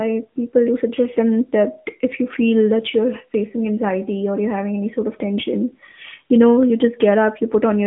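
Throughout the speech, the AMR narrowband mobile codec rebuilds the voice from a vocal-tract model at a mode that fits roughly 10 kbps, giving a plainly buzzy, synthetic edge. A spectrogram shows an empty region above a flat ceiling near 3.6 kHz and a 150 Hz to 3.4 kHz telephone band.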